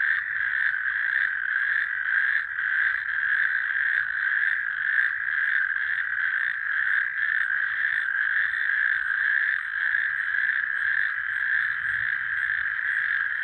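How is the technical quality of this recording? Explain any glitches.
No glitches or faults heard.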